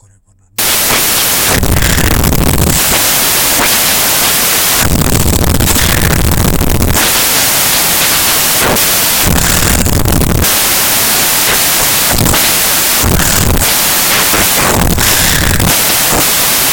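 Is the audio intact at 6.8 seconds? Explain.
No. From 0.59 s through the end of the clip, the speech has samples built from the wrong bytes: each value is assembled with misplaced or swapped bytes, so the rapidly changing low bits dominate. At 6.8 s this sounds as loud, harsh broadband noise.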